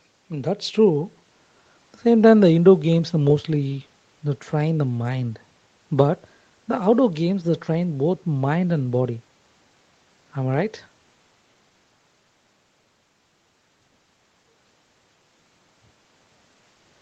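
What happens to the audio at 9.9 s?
At 9.9 s the speech carries on intact, with nothing beyond the ordinary call-path sound, where the Opus coding limits the band to about 8 kHz.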